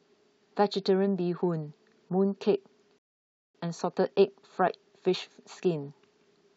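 At 2.98 s the speech halts in a rebuffering stall: playback ran dry, silence holds until 3.55 s, then resumes intact, adding about 0.56 s.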